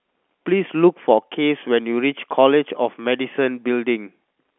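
Nothing goes wrong anywhere in this speech, which simply carries the narrow sound of ordinary G.711 telephone coding, with the band running from about 250 Hz up to 3.4 kHz and nothing at all above 3.6 kHz.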